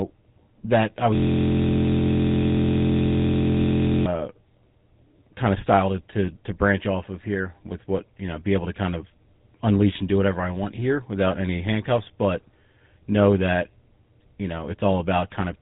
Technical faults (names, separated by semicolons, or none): GSM full-rate codec; system hang loop